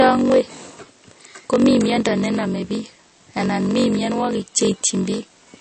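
A block size mismatch (padded) runs through the whole speech clip. One stage writes shorter blocks than the next reads, so zeros fill each gap. That gives a steady 46.9 Hz buzz, fitting a 1024-sample read block. The speech runs at 0.938 speed, about 6% slow, at near-normal pitch.

Also throughout, the speech sounds plainly watery and swirly. Nothing is present above 8.3 kHz. Consonant attacks smear. The likely cause is MP3 compression at a low bitrate, around 32 kbps. Starved of bits, the encoder cuts the treble and drops weaker detail.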